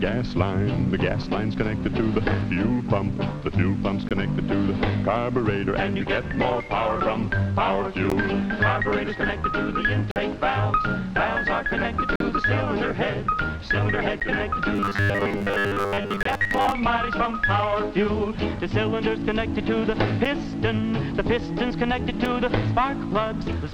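Short hard-edged silences, a gap between stream segments each time, land at 4.09, 8.10, 10.11 to 10.16, 12.16 to 12.20, 14.20, 16.23 to 16.26, 20.25 and 22.25 s, lasting 4 to 46 ms and following 2-second segment boundaries. From 14.76 to 16.72 s there's robotic sound from repeated short buffers, a rigid 100 Hz buzz, likely from about 10 ms chunks being replayed in place of most of the real audio.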